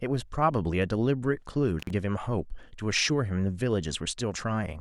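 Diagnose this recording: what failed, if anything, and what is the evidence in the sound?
Intermittent contact in the analogue wiring: around 1.80 to 1.91 s the speech cuts out for about 47 ms with crackle at both edges, classic loose plug.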